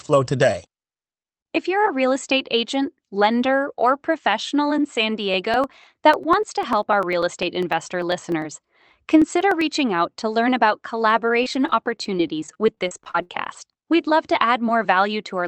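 Periodic USB or driver dropouts run from 5.34 s to 9.61 s, ending just before "out to learn about". A blocked bus or driver skips about half a millisecond of speech every 99.5 ms, roughly forty times, producing an even ticking heard only while speech is present.

Repeated packet loss (robotic sound) follows from 11.43 s to 13.60 s, right after "out to learn about". Twenty-six holes, the longest 70 ms, are patched by stretching the last sound. About half a second is rebuilt this way, leaving choppy speech. Throughout, the Opus call path's 8 kHz bandwidth limits the high end.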